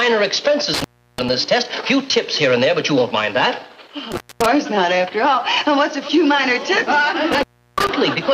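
Intermittent contact breaks the signal three times: from 0.74 to 1.29 s, 4.12 to 4.46 s, and 7.32 to 7.89 s. A loose cable or plug briefly loses its connection, so the audio drops out for about 342 ms, 231 ms and 345 ms respectively, leaving faint hiss while the line is open. Each gap is framed by crackle as the contact scrapes apart and then reseats.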